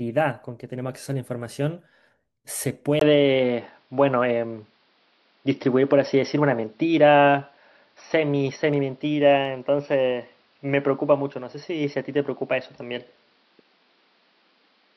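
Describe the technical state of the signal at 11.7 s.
At 11.7 s you're well inside a stretch that sounds like the input switched to a poorer device, most likely a change of microphone or a headset dropping into its call profile. It starts at 2.99 s with a brief 20 ms gap and runs to the end. From there the sound is dull and boxy with nothing above 5.7 kHz, the level shifts by a few dB, and new background noise sits roughly 40 dB under the speech.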